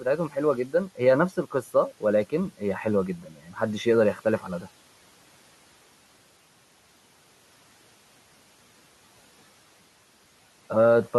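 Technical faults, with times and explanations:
0.00–0.36 s, 0.67–0.99 s and 3.18–3.57 s: speech cut by the noise suppressor. The suppressor mistook brief parts of the speech for the room noise, which sits about 26 dB below. It lowered them by about 9, 10 and 12 dB. Those moments sound faint and swallowed.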